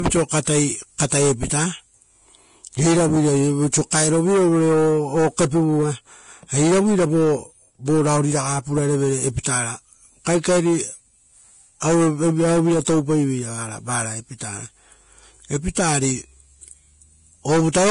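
From the start, the speech sounds hissy and grainy, with nothing above 10.6 kHz. This is likely heavy Vorbis compression at a low bitrate, around 31 kbps. The grain rises and falls with the signal, unlike steady background noise.

Pre-echo appears at 0.43–0.47 s, 0.98 s, 1.09–1.12 s, 3.91 s, 11.80–11.82 s and 15.75 s. A brief hiss of up to 38 ms comes before each sharp onset, not after it as reverb would.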